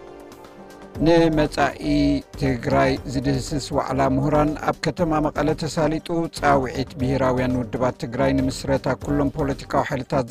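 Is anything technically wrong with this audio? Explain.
Yes, there's overlap-add ripple throughout: frames were rejoined with overlap that doesn't sum evenly, so the level pumps by about 11 dB around 300 times a second, giving a rough robotic buzz.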